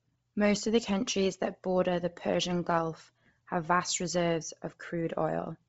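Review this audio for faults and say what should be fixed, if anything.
Throughout, the speech sounds breathy and grainy, with nothing above 7.7 kHz. Likely Bluetooth LC3 compression, heavy enough to fit a low bitrate near 24 kbps. Record over a wired link or use a higher LC3 bitrate.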